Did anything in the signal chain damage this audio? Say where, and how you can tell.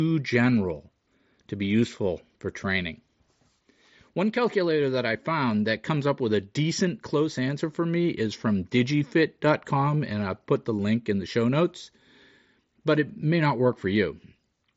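No, the signal chain did no damage: the speech comes through the wideband Bluetooth mSBC headset codec as that codec is meant to work, with the band stopping at about 7.7 kHz and a light grain on louder passages.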